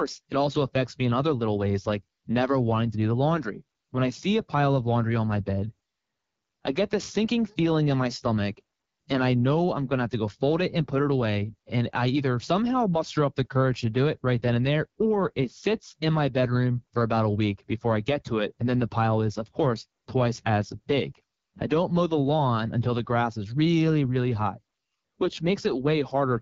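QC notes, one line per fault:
Throughout: AMR wideband (HD Voice) codec damage, plainly audible across the speech. The codec rebuilds speech below 6.4 kHz from a vocal tract model excited by sparse pulses, and here the excitation is coded too coarsely to follow the real waveform, so voicing comes out rough and raspy. The band from 6.4 to 7 kHz is filled with shaped noise rather than real detail. The roughness points to one of the codec's lowest rates, fitting about 8.85 kbit/s.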